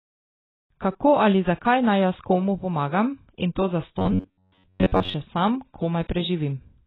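From the first moment to the end, the speech carries AAC compression damage, likely from AAC-LC at a very low bitrate, around 16 kbps. The high end is simply gone. The sound is dull and smeared. Sibilants lose their edge and turn fizzy. Sustained vowels warble. The damage is heavy and stays constant across the whole clip.

After "komu pomagam in to", from 3.99 s to 5.15 s, robotic sound from repeated short buffers takes over. New audio likely arrived too slowly, so short slices were played again while fresh audio was skipped. Most of this stretch is repeated material. The repeats impose a fixed buzz at 93.8 Hz. That points to slices about 10.7 ms long. The speech becomes a stiff metallic drone that only loosely follows the syllables. Normal sound returns at "še sam".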